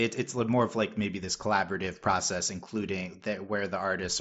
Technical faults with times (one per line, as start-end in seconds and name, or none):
none